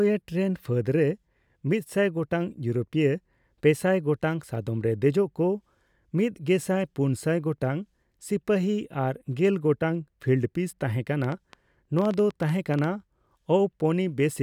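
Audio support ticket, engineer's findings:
Train of clicks, 11.24–12.85 s: around fifteen near-identical pulses, 8.8 per second, uneven spacing, peaking above the speech. Likely interference from nearby equipment or a faulty connection or power supply.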